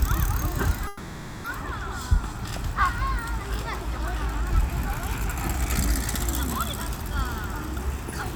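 A recording of everyday sounds with two network-timing faults. From 0.87 to 1.46 s there is a call audio freeze, likely from delayed packets draining the jitter buffer. The last sound is stretched into a fading buzz for about 0.57 s, then the audio resumes where it stopped, now running that much later. From 7.24 to 8.33 s a jitter buffer speed-up trims the excess backlog by repeatedly cutting short pitch-period slices, about 70 ms in total. The sound runs around 5% fast at unchanged pitch and feels slightly hurried.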